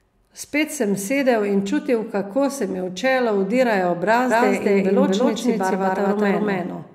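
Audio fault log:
4.30 s to end: doubled audio track. Right after "mi v čelo vtirajo" a second full-band copy of the speech cuts in abruptly at roughly the same loudness and trails about a fifth of a second behind, with no decay or room colour to it. Likely an edit holding two copies out of step.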